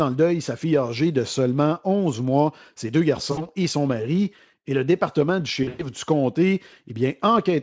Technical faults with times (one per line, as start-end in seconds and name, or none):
3.31-3.47 VoIP packet loss concealed by the speech codec
5.63-5.84 VoIP packet loss concealed by the speech codec